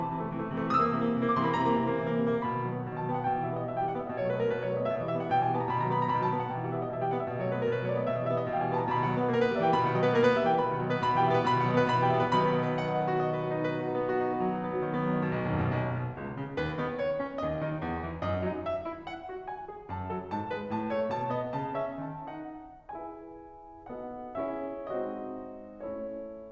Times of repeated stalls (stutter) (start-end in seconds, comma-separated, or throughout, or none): none